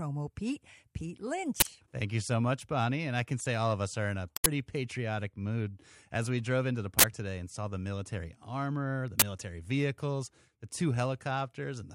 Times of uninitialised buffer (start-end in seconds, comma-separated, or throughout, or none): 1.60-1.63, 4.37-4.46, 6.99-7.04, 9.20-9.22